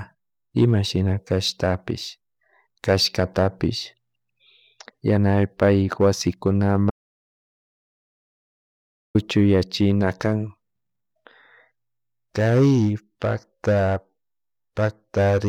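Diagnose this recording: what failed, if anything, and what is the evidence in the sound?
The input device or link likely dropped while recording continued, an audio dropout to silence: from 6.90 to 9.15 s, speech and room tone vanish.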